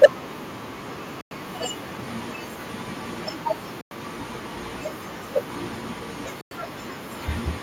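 Right at the start, from 0.03 to 0.06 s, the opening sound has a harsh, crackling edge, with its peaks flattened rather than rounded. This is microphone overload. The input was driven roughly 9 dB past what the converter can represent, so a large share of the waveform in that burst hits the ceiling and is sliced off. The likely cause is an input volume set too high for the loudest moment of the speech.

Almost at once, at 0.04 s, the level of the speech and the background drops together by about 2 dB in a single step instead of a gradual fade. This is the microphone volume being stepped down. Coming on top of that distorted peak, it points to call software that detected the clipping and likely cut the device's input gain in one move to stop it happening again.

Later, the audio breaks off into short silent holes with abrupt edges, at 1.21 to 1.31 s, 3.81 to 3.91 s and 6.41 to 6.51 s. Each hole is 100 ms long, and they come at a steady 2.6 s spacing. 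These are gaps between chunks. The audio was handled in 2.5 s blocks, and silence was inserted at each join, perhaps from padding or from playback starting each block late. Nothing is lost, but the flow of the speech is interrupted at every boundary.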